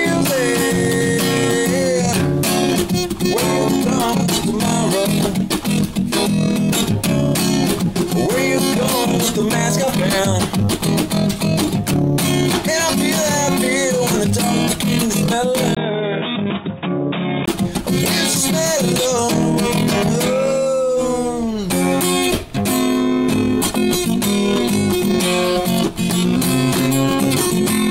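An input switched to a poorer device runs from 15.75 to 17.48 s in this audio. After a brief gap of about 20 ms, the sound turns dull and boxy, with nothing above 3.8 kHz. It is also about 5 dB quieter and carries a faint new background noise roughly 45 dB below the signal. The likely cause is the system moving its input to another, narrower-band microphone or a headset call profile before returning to the original at 17.48 s.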